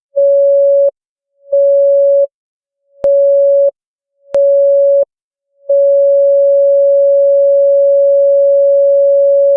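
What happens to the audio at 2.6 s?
Nothing goes wrong at 2.6 s; the sound carries on intact through that moment, with no dropout, click, distortion or other fault.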